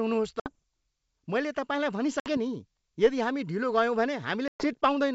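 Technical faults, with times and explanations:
0.40 to 0.55 s, 2.20 to 2.30 s (just after "मैले तपाईँलाई") and 4.48 to 4.74 s: packet loss on an ADPCM call. The speech drops to hard-edged silence, with about 60 ms, 60 ms, then 120 ms lost. The last gap equals several packets. The receiving decoder's predictor and step size no longer match the sender's. So the speech comes back with brief, slight distortion, then settles. The wideband G.722 coding underneath stays clear.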